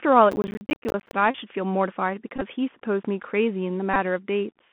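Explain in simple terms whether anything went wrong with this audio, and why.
Yes, several things went wrong in this speech clip.

The whole clip passed through the Bluetooth CVSD headset codec, the basic codec used for headset calls. It keeps only a narrow band, roughly 150 Hz to 3.4 kHz, so the voice sounds thin, like an old phone. The codec builds the sound from tiny up-or-down steps. Sharp, loud high sounds outrun those steps. So the damage is plain here: scratchy s sounds and a fine, grainy hiss under the speech.

From 0.32 to 1.13 s there is processor overload crackle. The device was too busy to prepare each small slice of audio in time. The slices were about 10 ms long, and roughly forty were missed. Each missed slice became a tiny silent gap with hard edges. Packed together, those gaps sound like a gritty crackle over the voice, and it stops once the overload ends.

At 1.31 to 1.36 s, 2.36 to 2.42 s and 3.94 to 3.96 s, there is a Bluetooth headset packet repeated fault. 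Some voice packets never arrived, so the headset played the last good packet again. A repeat every 3.75 ms makes a short, steady buzz near 267 Hz. The first two gaps each lost about 37.5 ms of sound, which fits about ten lost packets. In the second, the losses are spread out and the longest unbroken run is about 15 ms. The last is shorter, about 19 ms.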